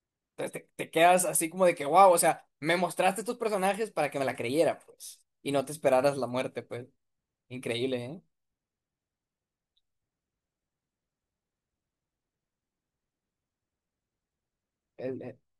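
At 7.43 s the speech hits a repeated buffer: new audio arrived late, so the same 1.45 ms slice, which fits a 64-sample buffer, played four times with hard joins. Unlike a single dropout click, the rapid repeats form a brief buzz, with a few milliseconds lost.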